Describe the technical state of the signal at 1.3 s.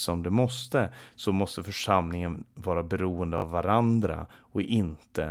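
At 1.3 s the speech signal is intact, with no audible fault at that moment.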